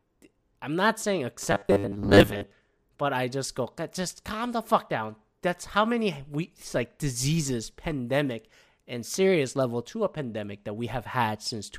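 After "I'm not saying", from 1.43 to 2.51 s, the speech turns into robotic sound from repeated short buffers: a rigid metallic buzz at 100 Hz that only loosely follows the words, lasting until "but I just go". The likely cause is audio arriving too seldom, so a 10 ms chunk is replayed over most of that stretch while real audio is skipped. A spectrogram shows flat, evenly spaced 100 Hz harmonics; the waveform shows identical 10 ms cycles.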